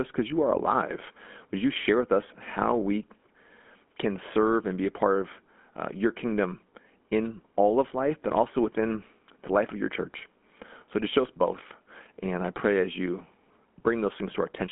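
Speech, run through a GSM full-rate codec for the whole clip. The sound sits in a narrow telephone band, roughly 200 Hz to 3.4 kHz, with nothing at all above about 3.7 kHz. The codec models the vocal tract and excites it with a sparse, regular pulse train. That thinned excitation gives the voice a plainly audible buzzy, gravelly roughness. The damage and bandwidth point to the 13 kbps first-generation GSM coder.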